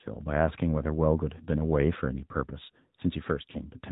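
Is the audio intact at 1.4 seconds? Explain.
No. From 1.38 to 1.47 s there are lost AMR speech frames: a single 20 ms frame failed, and the decoder filled it by repeating the previous pitch and vocal tract settings at reduced gain. The result is a brief dip or warble, not a hard silent gap or click as a plain dropout would leave, and the sound returns rough for a moment.

Underneath, the AMR narrowband mobile codec runs through the whole clip: nothing above 4 kHz, and a buzzy, synthetic quality that fits a bitrate around 10.2 kbps. This comes from the low bitrate vocal tract model, unlike a simple low-pass filter that would only dull the sound.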